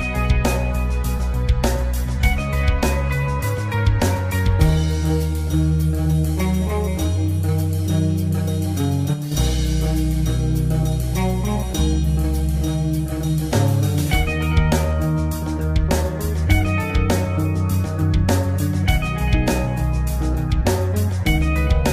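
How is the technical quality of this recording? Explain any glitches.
Two glitches stand out.

At 1.17 to 1.20 s there is a corrupt frame concealed: a damaged compressed frame was detected and its audio muted or smeared, leaving a soft, brief hole without clicks.

From 9.14 to 9.32 s the level abruptly falls by about 6 dB and then recovers. This is likely one channel dropping out, halving the shared content once the channels are summed.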